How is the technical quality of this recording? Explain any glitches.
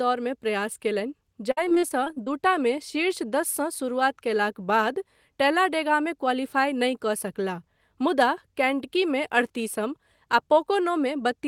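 The recording has one clear glitch, early in the clip.

From 1.51 to 2.28 s the speech turns choppy, with small pieces missing. This is repeated packet loss: audio kept failing to arrive, leaving a rapid series of short holes, the longest about 54 ms. Each hole was patched by continuing the sound just before it, so roughly a quarter of that stretch is filled-in rather than real audio.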